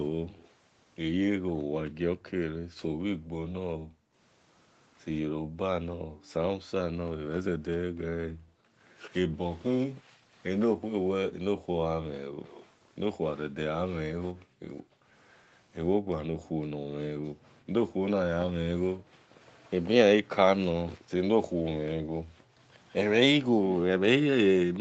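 A speech recording with two problems. From 0.11 to 22.52 s, the background is gated by the echo canceller. The room sound keeps dipping or vanishing, by as much as about 40 dB, for roughly five seconds in all. Each time the far end played through its loudspeaker, the canceller clamped this microphone down, then let the room tone back in. A faint delayed double of the speech trails it by 176 ms at 0.32 to 2.3 s, 9.1 to 9.14 s, 12.45 to 15.6 s and 19.49 to 19.71 s. It sits roughly 25 to 35 dB under the speech, strongest in the 12.45 s stretch. This is likely echo leak: the other side's canceller missed part of the loudspeaker sound its microphone caught and sent it back. The audio stops at 8 kHz, as expected on this call path.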